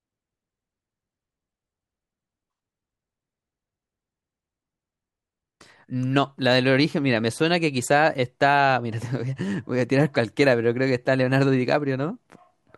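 Nothing in this speech recording stands out as a technical fault at any point.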